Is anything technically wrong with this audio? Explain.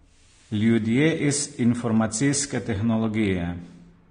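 Yes. Throughout the speech, there's nothing above 9.7 kHz, and the sound is plainly dull and smeared, with a fizzy, warbling texture on sibilants. That points to AAC compression, likely AAC-LC at a bitrate around 32 kbps, where coarse quantisation lowers the cut-off and thins the spectrum.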